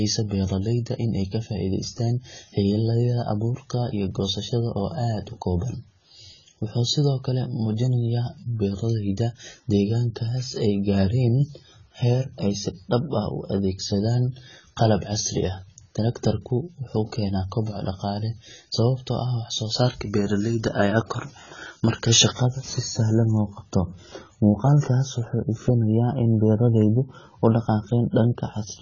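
From start to finish the speech sounds dull and smeared, with nothing above 7 kHz. The sibilants come out fizzy and the sustained vowels warble. That's the signature of AAC compression, likely AAC-LC pushed hard. At a bitrate that sounds like something around 16 kbps, the encoder lowers its cut-off and leaves holes in the spectrum, or fills whole bands with substitute noise. That's where the swirly, papery texture comes from.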